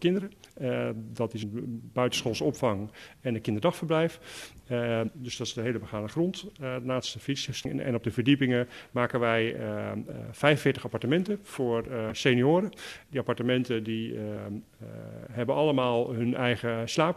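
Damaged data in a compressed stream appears at 1.42 s, 5.06 to 5.09 s, 7.64 s and 12.10 s. Corrupted bytes make the decoder misread frames and lose sync while it hunts for the next header, heard each time as a brief chirp or blip.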